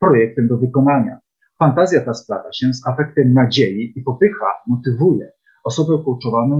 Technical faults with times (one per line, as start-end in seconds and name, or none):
none